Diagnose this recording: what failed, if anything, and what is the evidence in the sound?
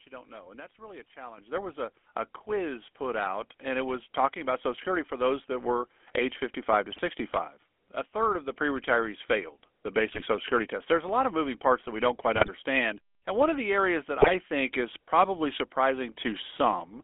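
The codec stage failed. The whole clip has the buzzy, gravelly roughness of the GSM full-rate codec. The band runs only from about 250 Hz to 3.4 kHz, which fits a 13 kbps link. Its coarse pulse excitation grinds the speech.

Call processing raised the microphone input three times. Voice and background jump up together. The volume stepped up by about 10 dB at 1.38 s after "that's really a", about 4 dB at 2.49 s after "was a a", and about 1 dB at 8.31 s. Each is one step in device gain.

The network link corrupted the stream. GSM bit errors give squawks, pops and gargling at 6.92–7.01 s, 10.1–10.23 s, 12.34–12.49 s after "that we don't quite", and 14.2–14.30 s. Flipped bits hit the decoder's filter, pitch and gain values. The spectrum bends and the level bursts for several frames each time.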